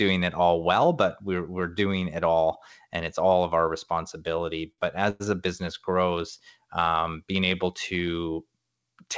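Just after "all of our responsibility", at 4.72 to 4.80 s, a sound hangs for about 61 ms with a faint buzz or dip, and again at 5.10 to 5.22 s, for 99 ms, before "a business grows um". Both are short stalls from a late packet: the jitter buffer ran dry and the receiver stretched audio until delivery resumed, losing nothing. Nothing above 8 kHz survives the call path, which fits G.722.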